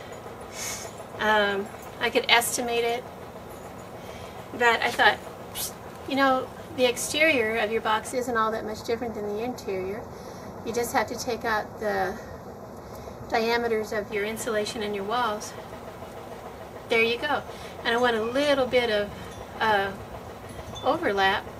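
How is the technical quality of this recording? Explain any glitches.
The recording has one glitch. From 8.12 to 14.12 s, channel delay (comb filtering) occurs: one channel lags the other by a fraction of a millisecond, and their mono sum cancels at evenly spaced frequencies, the first near 3 kHz, leaving the sound hollow and phasey.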